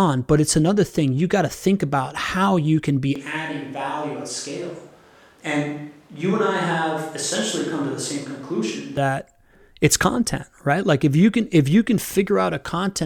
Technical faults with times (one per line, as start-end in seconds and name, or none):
3.16-8.97 switch to a distant microphone